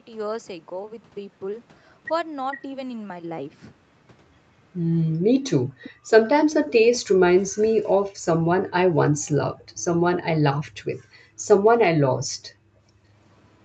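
A speech recording carried over a call path whose band stops at 8 kHz, with three kinds of echo-canceller trouble. Speech suppressed in double talk appears between 5.35 and 6.6 s and again from 12.11 to 12.43 s: the talker drops out in short deep dips, likely because the canceller muted both sides while the far end spoke. Background gated by the echo canceller pulls the room sound down by about 40 dB for roughly 0.1 s at 5.68 to 5.8 s, then intermittently between 8.09 and 13.08 s for around 1.5 s in total, as the microphone is clamped during loudspeaker playback. An echo leak returns a delayed copy of the speech about 450 ms late and about 20 dB down from 5.83 to 6.98 s. A fainter scrap about 40 dB down and 470 ms late follows at 10.66 to 10.71 s, residue the canceller likely failed to remove.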